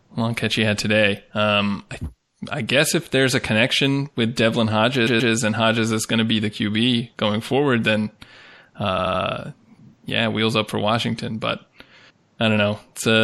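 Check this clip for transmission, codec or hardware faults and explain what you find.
Two things are wrong here: a codec problem running through the whole clip and two spots of repeated frames. Throughout, the speech sounds watery and swirly, with smeared consonants, most likely MP3 compression at a low bitrate, around 64 kbps. At 5.06 to 5.32 s a 130.6 ms chunk plays twice more, and at 8.98 to 9.21 s a 78.4 ms chunk repeats three extra times. These are repeated frames, where compressed data got resent or rewritten, so you hear a stutter.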